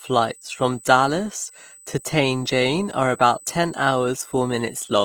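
USB whine throughout: a fixed 8 kHz tone, roughly 25 dB below the speech, from the bus's 125-microsecond microframe current pulses leaking in through the power or ground.

Opus compression, also throughout, is the likely cause of the grainy, rough texture: the full-band music mode is filling starved bands with folded or noisy energy, consistent with a bitrate near 24 kbps.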